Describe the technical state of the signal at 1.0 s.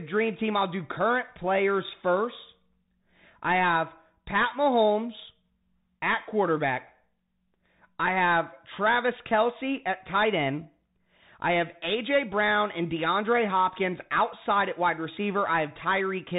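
At 1.0 s the speech carries Bluetooth CVSD headset codec damage, as it does across the whole clip. The one-bit delta coder's adaptive step lags fast, loud high content, so sibilants turn scratchy over granular hiss, with nothing above 4 kHz, which fits a 64 kbps CVSD link.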